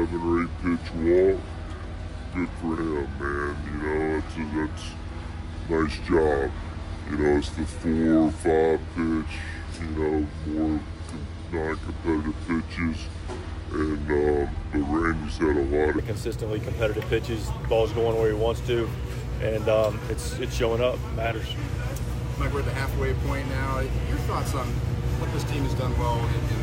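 From 0 to 15.98 s the audio plays as a section at the wrong speed, 0.673 times normal and roughly seven semitones low, likely a clock mismatch. Unlike a pitch shift, tempo drops too.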